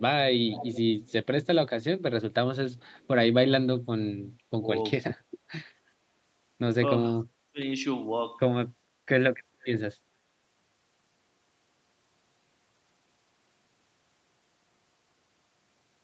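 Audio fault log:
0.49–0.81 s, 1.05–1.26 s, 2.76–3.07 s: echo leak. A faint delayed copy trails the sound by about 430 ms, likely residual loudspeaker pickup the far-end echo canceller missed, fading from about −15 dB to −40 dB.
4.38–4.61 s, 7.52–7.60 s: speech suppressed in double talk. The talker dips by up to about 25 dB in brief chops, likely the echo canceller muting near speech during overlap.
9.62–9.67 s: echo leak. A short delayed scrap at about 450 ms and about −25 dB, likely the same uncancelled return path briefly getting through again.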